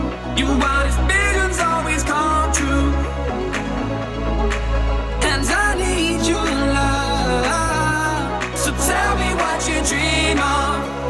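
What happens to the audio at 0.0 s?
Nothing goes wrong at 0.0 s; the audio there starts cleanly and plays intact.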